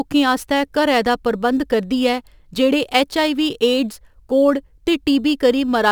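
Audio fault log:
Throughout, crude rate conversion: a gritty, inharmonic fizz clings to the speech, strongest on loud and bright sounds, sitting roughly 30 dB below the signal. Samples were repeated to raise the rate with no filtering, which fits a step from 44.1 kHz to 48 kHz, leaving a patterned error that forms stray tones.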